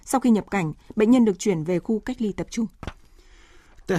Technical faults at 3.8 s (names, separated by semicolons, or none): none